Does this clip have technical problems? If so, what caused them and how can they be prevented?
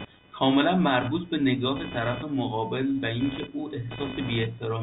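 Yes. Computer activity noise runs throughout as a buzzy, chirping layer with a pulse rate around 500 Hz, sitting roughly 15 dB below the speech. Processor or graphics load shifts the ground the audio circuit shares, so the buzz follows the computer's activity rather than the sound. Prevent it by using an external USB or isolated audio interface, or a ground-loop isolator, instead of the onboard input.

Packet loss with last packet repeated occurs at 4.10 to 4.12 s, a 20 ms gap that fits a single lost packet. The receiver replayed the previous chunk, heard as a small blip. Beneath this the G.711 telephone band stays intact. Prevent it with a stable wired connection, a larger jitter buffer, or packet loss concealment that interpolates instead of repeating.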